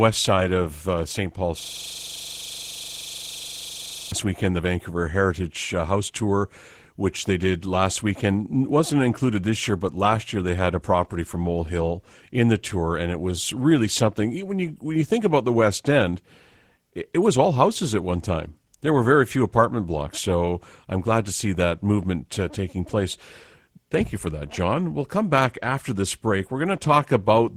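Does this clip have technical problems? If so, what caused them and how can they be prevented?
Yes, there are two. The first is Opus voice compression across the whole clip. At 16 kbps, in hybrid mode with the full band nominally kept, the encoder is starved. SILK handles the lower band with a coarse excitation, and the thin CELT layer on top can't do much. So the speech comes out a bit muffled, hoarse and faintly robotic, and that damage is plainly audible. To prevent it, give Opus a higher bitrate, something like 32 kbps or more for speech.

The second is a system hang loop from 1.6 to 4.12 s, ending just before "weekend the". The machine or driver stalled while the sound card kept replaying its ring buffer. One 42.67 ms slice of audio repeats about 59 times, a stutter running at roughly 23.4 Hz, which fits a 2048-sample buffer going round and round. To prevent it, track down the stalling driver or process and have playback mute when the buffer stops being refilled, rather than recycling stale audio.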